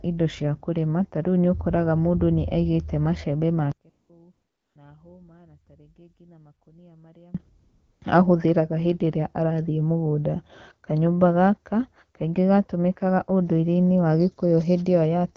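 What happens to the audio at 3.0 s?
Nothing goes wrong at 3.0 s; the speech passes through intact there, carried by the AMR wideband (HD Voice) codec at 12.65 kbit/s, with no dropout, glitch or added distortion at that moment.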